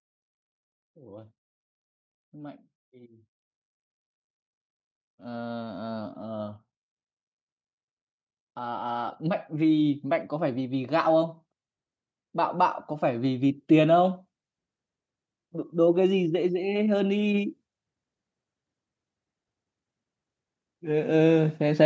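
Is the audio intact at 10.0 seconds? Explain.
No. Automatic gain rising runs from 8.55 to 11.39 s, so 10.0 s falls in the middle of it. The gain control judged the incoming speech too quiet and pushed its gain up steadily, by about 6 dB over nearly three seconds. At 10.0 s the level is still climbing, and the voice and the background noise swell together rather than the speaker simply getting louder. The call microphone processing stays in place throughout, with nothing above 8 kHz.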